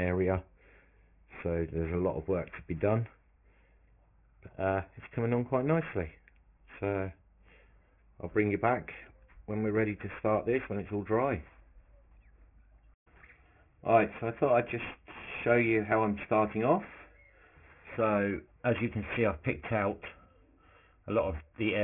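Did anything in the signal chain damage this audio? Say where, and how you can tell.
Yes, there's aliasing at the sample-rate conversion stage, and it runs through the whole clip. Everything tops out hard at 3 kHz, with gritty, metallic junk tangled into the upper band. That points to a drop from 44.1 kHz to roughly 6 kHz with no anti-alias filter first. Content above the new 3 kHz Nyquist limit folds back down as unrelated tones, sitting somewhere around 20 dB under the real signal.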